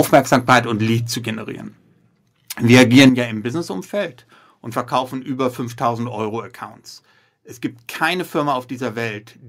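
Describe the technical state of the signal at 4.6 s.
At 4.6 s the speech signal is intact, with no audible fault at that moment.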